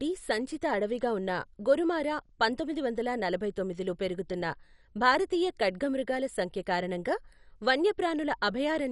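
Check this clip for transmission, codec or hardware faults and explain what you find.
The speech is likely coded with MP2 compression at a very low rate, consistent with about 48 kbps, throughout the clip. Starved of bits, the sub-band coder shuts off upper bands, leaving nothing above 11.3 kHz, and coarsely quantises the rest, so the speech sounds dull, gurgling and granular.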